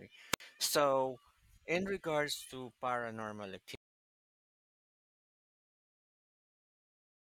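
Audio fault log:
0.31–0.41 s, wireless microphone squelch dropout: hiss swells briefly as the FM radio link weakens, then the receiver's squelch gates the output shut for about 62 ms, leaving a hole of near silence before the speech returns.
3.75 s to end, audio dropout to silence: right after "in regards to paranormal" the speech cuts off mid-flow and the remainder is silent with no room tone. This fits the input signal being lost while recording continued, likely from a disconnected source or failed link.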